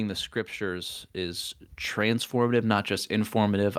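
A speech recording in which, from 0.57 s to the end at 3.78 s, the automatic gain is rising: the gain control treats the input as too quiet and steadily turns it up, so the voice and the background noise swell together over the remaining three seconds.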